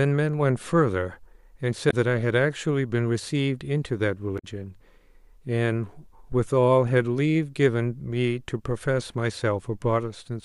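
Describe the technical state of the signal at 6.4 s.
A phantom power thump runs from 6.32 to 6.57 s, covering the 6.4 s point. A supply was switched on or off on a live input, and that sudden DC step travelled through the input's coupling capacitors as a single low-frequency pulse. It is heard as a deep, dull thump laid over the speech, dying away with a decay of about 55 ms rather than ringing on.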